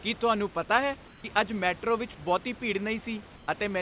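Comfort noise in place of the background, at 1.08–1.24 s and 3.36–3.48 s: the room sound briefly becomes a flat, featureless hiss about 3–4 dB quieter, likely discontinuous transmission filling pauses with synthetic noise.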